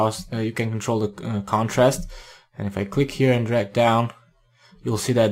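Nothing goes wrong anywhere in this one; there's no fault to point to at any moment.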